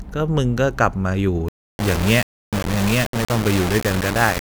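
A speech clip that turns harsh and grainy from 1.48 s to the end, with distortion almost as loud as the speech itself. The likely cause is low bit depth without dither: the samples were rounded to very few levels, which fits about 4 bits. Unlike steady hiss or dithered noise, this grit rises and falls with the speech and follows its shape, while the quietest moments drop to silence or sputter between steps.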